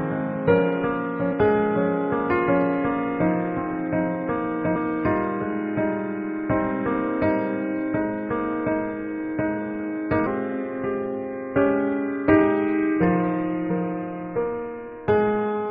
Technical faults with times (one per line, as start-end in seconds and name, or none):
4.75 damaged data in a compressed stream
10.25 damaged data in a compressed stream